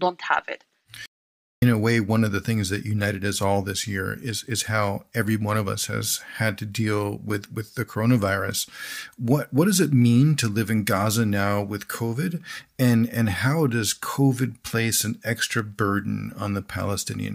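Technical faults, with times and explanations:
1.06–1.62 s, playback stall: the player likely ran short of data or was blocked, so the speech cuts to silence for about 0.56 s before resuming.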